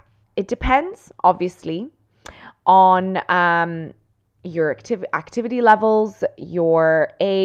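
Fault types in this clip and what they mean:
No faults are audible.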